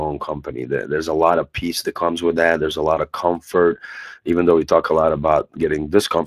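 Speex codec damage runs through the whole speech clip and is plainly audible. The CELP coder rebuilds the speech from a vocal-tract model and a coded excitation, which is where the damage comes from. The sound fits a bitrate near 22.4 kbps.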